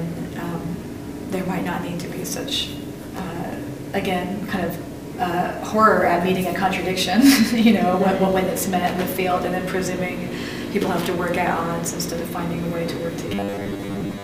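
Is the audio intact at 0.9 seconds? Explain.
Yes, the audio is intact at 0.9 seconds, with no dropout, click, distortion or other fault at that point.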